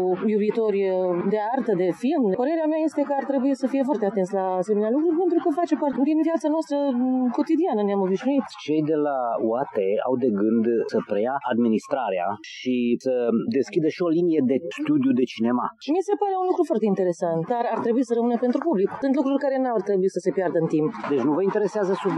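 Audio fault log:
Nothing here sounds wrong to my ears, so there's nothing to log for this one.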